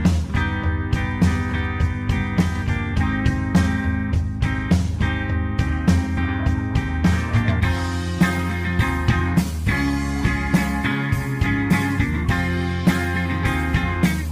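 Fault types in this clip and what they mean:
No faults detected; nothing to list for this audio.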